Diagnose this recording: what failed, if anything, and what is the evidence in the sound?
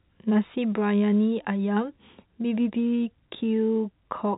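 Nothing stood out on listening: the speech comes across as ordinary telephone-band audio, with nothing above about 3.8 kHz, as expected from G.711 A-law telephone coding.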